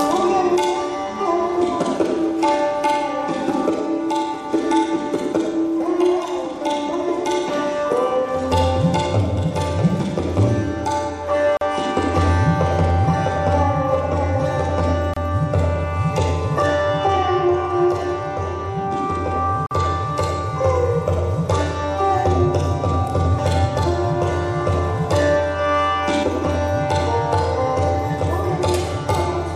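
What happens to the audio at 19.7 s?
At 19.66 s the sound drops out for about 46 ms, resuming at 19.71 s exactly where it left off. This is a gap at a join of encoded pieces: two separately encoded segments were butted together with the encoder's start-up delay and final-frame padding left in, so silence sits at the seam. On a waveform it shows as a flat notch with smeared edges; on a spectrogram, a thin blank vertical stripe with slightly blurred borders.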